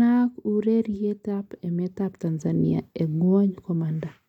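Speech recording with no audible technical faults.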